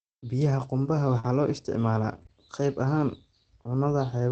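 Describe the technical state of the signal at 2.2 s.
Short concealed packet loss occurs twice in a row, from 2.23 to 2.27 s and from 2.27 to 2.30 s. Each time about 20 ms of audio missed the decoder, which extended the preceding sound and blended back. The result is a brief smeared wobble rather than the silent gap or sharp click of an unconcealed dropout.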